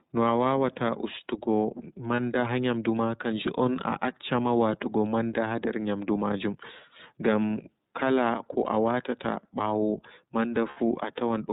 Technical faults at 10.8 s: iLBC codec; lost iLBC frames

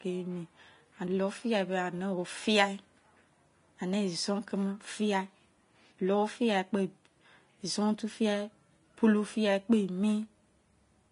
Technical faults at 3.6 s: Vorbis compression

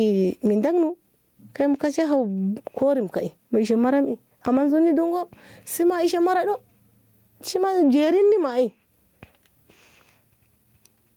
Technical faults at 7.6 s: gain pumping

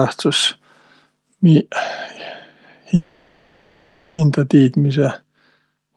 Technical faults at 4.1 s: call audio freeze

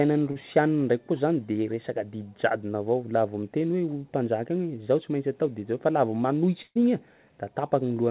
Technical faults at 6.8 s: burst of packet loss

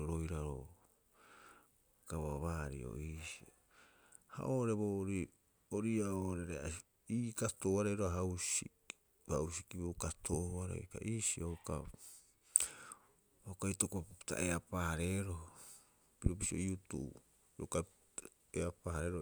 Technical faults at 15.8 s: none

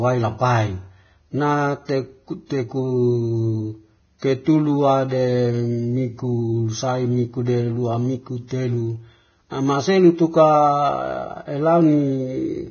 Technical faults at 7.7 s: Vorbis compression

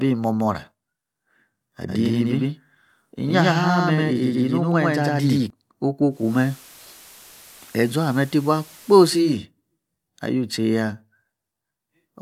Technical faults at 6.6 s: digital radio blending to analogue

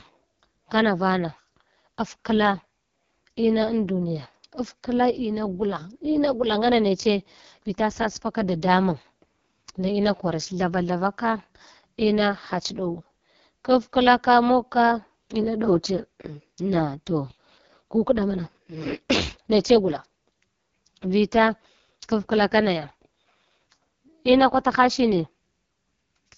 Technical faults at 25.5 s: AMR wideband (HD Voice) codec

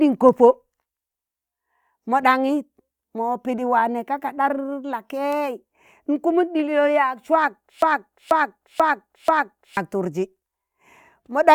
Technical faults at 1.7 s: none

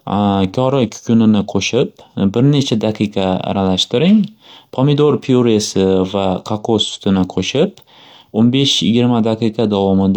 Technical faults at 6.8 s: damaged data in a compressed stream

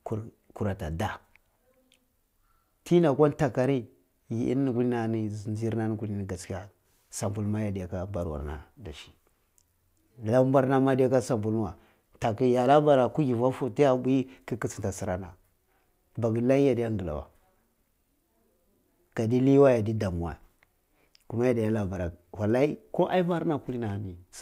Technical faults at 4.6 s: none

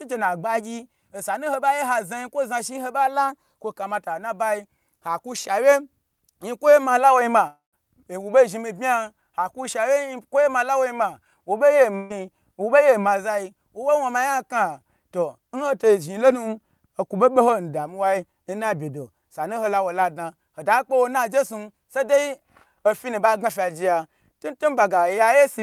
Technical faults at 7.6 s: long network dropout

